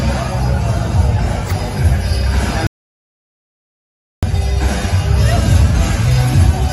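The audio has an audio dropout to silence from 2.67 to 4.23 s: about 1.56 s of dead silence, likely from lost input while recording continued.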